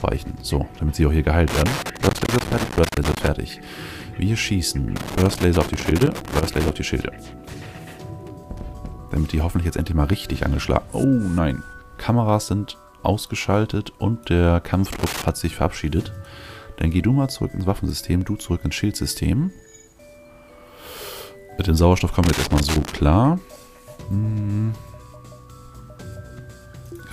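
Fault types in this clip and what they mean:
loose connector crackle: Four irregular bursts of crackle and scratching, the longest nearly two seconds, from a worn or dirty contact rapidly making and breaking the signal.
dropped samples: Five isolated sharp clicks, each likely caused by under a millisecond of audio going missing, so the waveform jumps abruptly to a later value.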